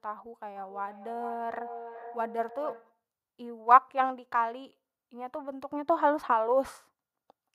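From 0.56 to 3.0 s there is feedback echo between two devices: one device replays another's microphone in the same room, and that microphone picks it up again. The sound returns about every 0.4 s, peaking about 16 dB below the speech. Its fixed repeat interval distinguishes it from room reverberation.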